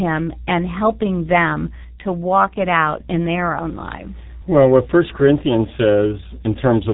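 Throughout, the speech sounds muffled and hoarse, with smeared consonants and nothing above 3.8 kHz. This is heavy G.723.1 codec damage, consistent with roughly 6 kbit/s.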